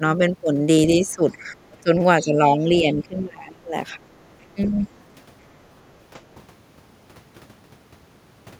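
From 0.96 to 1.62 s, 1.81 to 1.9 s, 2.2 to 2.38 s, 2.58 to 3.74 s and 4.0 to 4.09 s, the talker's speech is suppressed in double talk. Level falls by roughly 10 to 20 dB, deepest at 1.81 s and in the long 2.58 s stretch. This is likely an echo canceller ducking the talker while far-end speech overlapped. The waveform shows pinched envelope sections, and the spectrogram shows faded, thinned bands.

At 4.21 to 4.46 s and 4.63 to 4.71 s, the other side's voice leaks through as residual echo. The first scrap is very faint, about 40 dB below the speech. The second is stronger, about 20 dB down. These likely come from loudspeaker pickup the canceller missed, and they appear on the spectrogram as weak, fragmented harmonic traces.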